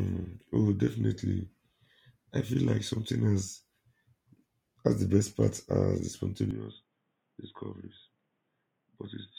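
At 6.51 s the speech suddenly goes dull and boxy and stays that way to the end. Nothing gets through above 3.8 kHz, the level drops by roughly 10 dB, and a faint new noise floor appears well beneath the voice. There's no gap at the changeover, just an abrupt shift in tone. That's the classic sound of an input switched to a poorer device, likely a headset call profile or a lesser microphone taking over mid-recording.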